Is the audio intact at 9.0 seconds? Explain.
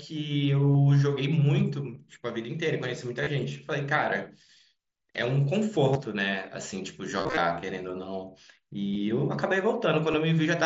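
No. At about 8.94 s, concealed Bluetooth headset packet loss drops roughly 15 ms of audio, which points to a couple of lost packets. The receiver fills the gap by repeating the closest-matching recent stretch, heard as a brief buzzy blip. The waveform shows a short repeated cycle at steady level, and the spectrogram shows evenly spaced harmonic stripes.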